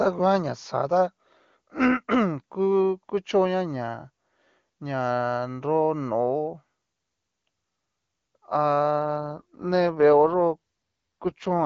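Speech over an HD Voice link shows an AMR rate drop from 9.01 s to the end. The voice turns rougher and more synthetic, which fits the AMR-WB codec stepping down from 23.85 to 8.85 kbit/s to spend bits on error protection. On a spectrogram the band still reaches about 7 kHz with no gap, but harmonics smear into grainier, noisier texture.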